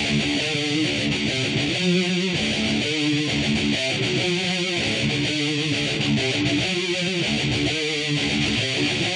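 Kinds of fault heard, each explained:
No faults can be heard anywhere in this sound.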